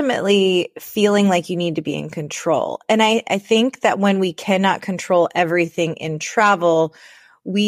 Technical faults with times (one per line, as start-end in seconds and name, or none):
none